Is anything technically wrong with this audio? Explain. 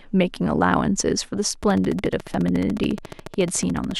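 Yes. From 1.63 s to 3.92 s, a train of clicks runs over the speech. About 30 sharp pulses arrive evenly, 14 per second, peaking a few dB above the speech. The likely cause is electrical interference or a faulty connection or power supply. It sounds like steady ticking.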